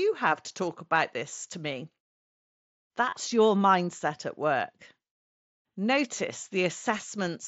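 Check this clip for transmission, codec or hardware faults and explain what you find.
Two short dropouts in the speech are concealed Bluetooth headset packet loss. From 3.10 to 3.13 s the sound turns briefly buzzy and steady, then warbles slightly as real audio returns. At 6.98 s a single shorter gap is nearly hidden. In each case, packets from the headset failed to arrive, and the phone filled the hole by repeating the best-matching stretch of recent waveform. The first gap spans about 22.5 ms, consistent with three lost 7.5 ms frames. The second fits a single frame, which is why it is so hard to hear. Around both, the mSBC link carries wideband speech with a light grainy edge.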